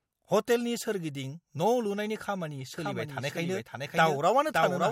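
From 2.74 s to the end, the speech is joined abruptly by a second copy of itself, about half a second late and somewhat quieter, with no room colour or decay. This doubled audio track is likely a second capture through a slower path, or two misaligned copies in an edit.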